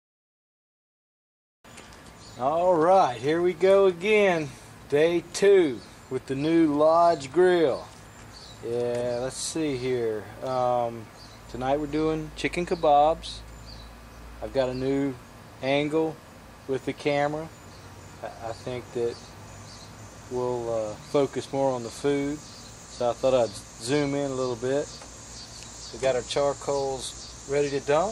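The signal holds steady for the whole recording, with nothing in it that points to a technical fault.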